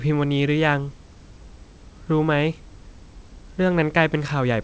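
Nothing goes wrong in this speech clip; it comes over an ordinary call path whose band stops at 8 kHz, which fits a G.722 wideband call, with faint room noise sitting about 36 dB below the speech.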